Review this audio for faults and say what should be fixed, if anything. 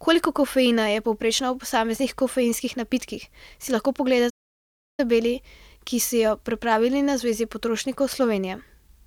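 At 4.29 s the speech stops abruptly in mid-flow and the output goes completely silent for 685 ms before picking up again at 5.0 s. This is a playback stall, likely caused by the player running short of buffered data or its audio thread being blocked until it could recover. A larger playback buffer and a high-priority audio thread that never waits on blocking work should prevent it.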